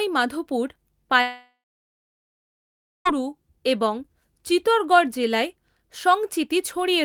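At 1.21 s the speech gives way to a buzzy, smeared continuation of the last sound, which fades over roughly a third of a second into near-silence lasting about 1.5 s. The speech resumes at 3.07 s, with about 1.8 s of it simply gone rather than delayed. This is likely a long network dropout: the stream stopped arriving, the receiver stretched out the final fragment it had, then fell silent until packets returned.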